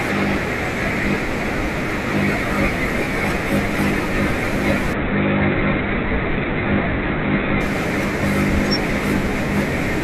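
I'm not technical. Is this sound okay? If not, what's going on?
No. From 4.93 to 7.61 seconds there is a Bluetooth SBC bit pool drop. The wireless link got crowded, so the phone cut how much detail it sent to keep the sound going. The bit pool, which is the data budget for each chunk of audio, fell sharply. The highest frequencies got almost nothing and everything else was stored roughly. The speech turns dull and muffled and picks up a gritty, sandy noise, then clears once the link recovers.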